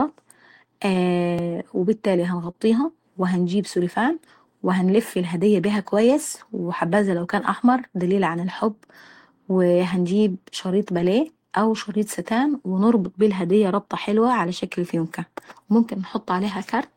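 A single sharp click at 1.39 s is a repeated buffer. The audio feed fell behind, so the output device replayed its most recent block once more. That block lasted only about 1.33 ms, which fits a 64-sample buffer. At that size the duplicated slice is far too short to hear as a stutter. What comes through is the abrupt seam where the copy butts against itself, and nothing meaningful is skipped.

From 2.43 to 2.49 s the sound turns briefly grainy and rough for about 40 ms, without any break in continuity. This is a lost packet rebuilt from error correction, here two lost packets. Each following packet carried a coarse, low-bitrate duplicate of the missing one, and the decoder played those duplicates in place of the originals. The gap is filled, but with cruder, noisier audio than the surrounding stream.

Right after, from 2.51 to 2.56 s, comes a short smeared wobble: a short concealed packet loss. 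Roughly 20 ms never arrived in time. The receiver extended the preceding sound to cover about 22 ms, then crossfaded back into real audio. The result is a momentary blur rather than silence, and any brief transient in that spot can be swallowed.

The same rough, noisy texture from error-correction rebuilding returns four more times. It appears at 6.36 to 6.42 s, lasting about 40 ms. At 10.94 to 11.04 s it runs longest, near 60 ms, pointing to three lost packets. At 13.04 to 13.06 s and 15.00 to 15.02 s it is a brief 20 ms patch each, consistent with single lost packets.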